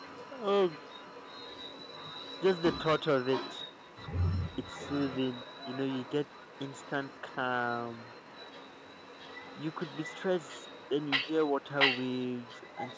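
A far-end echo canceller likely let its loudspeaker pickup through, so this speech carries an echo leak: a copy trailing about 0.68 s behind, heard at 0–0.43, 0.66–2.79, 2.99–7.36, 7.69–10.23, 10.39–11.31 and 11.47 s to the end, mostly about 15 to 20 dB down, rising to about 5 dB down at the close.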